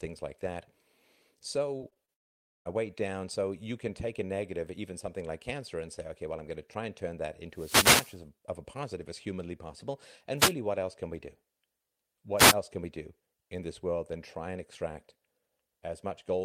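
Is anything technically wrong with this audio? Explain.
Yes. The speech has three kinds of fault.

From 1.77 to 2.10 s there is repeated packet loss, which gives a robotic sound. Four short gaps occur, the longest 23 ms. Each is patched by stretching the previous sound. About a quarter of that span is concealed, so the speech turns choppy.

Right after that, from 2.14 to 2.67 s, the audio stops for about half a second. This is likely a long network dropout. The stretch is almost entirely silent. When sound resumes, the missing part is gone.

Wireless microphone noise hits occur three times. They sound like bursts of static or swish. The first runs from 7.51 to 8.21 s, between "try and turn that" and "of a positive as". The second runs from 10.37 to 10.54 s, after "positive as humanly possible". The third runs from 12.37 to 12.55 s, just before "can we do in". Each is a fade in the FM radio link that lets receiver noise rise over the speech.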